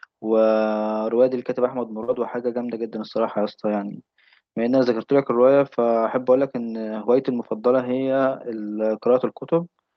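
A speech clip with two brief smears close together, from about 2.03 to 2.10 s and again from 2.14 to 2.17 s, where the sound wobbles and blurs instead of moving on cleanly. This is short concealed packet loss: roughly 40 ms and then 20 ms of audio arrived too late, so the receiver stretched the preceding sound to bridge each gap before fading back into real audio. It travelled over an Opus call path, with content stopping near 8 kHz.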